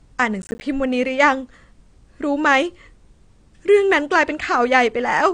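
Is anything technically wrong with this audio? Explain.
Yes, there are two faults in this speech clip.

Throughout, the sound is dull and smeared, with nothing above 9.6 kHz. Likely cause: AAC compression at a low bitrate. The encoder cuts the top band and coarsely quantises what remains. Sibilants lose their edge and take on a watery, fizzy texture.

From 0.42 to 0.61 s there is processor overload crackle. The processor misses a run of deadlines, about ten in a row. Each miss drops a short buffer, around 10 ms, to silence with hard edges. Together they make a gritty tearing burst.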